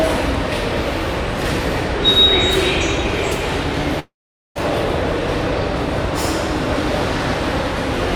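From 3.99 to 4.57 s the sound breaks off into a fading buzz that drops to silence for about 440 ms, then resumes further on with roughly 0.56 s missing, most likely a long network dropout. Unlike a brief packet-loss glitch, the concealment gives out and the gap goes quiet.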